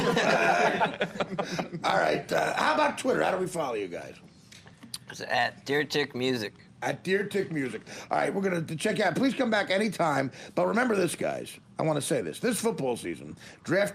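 No technical faults can be heard anywhere in the audio. Nothing in it points to a problem in how the sound was captured, processed or delivered.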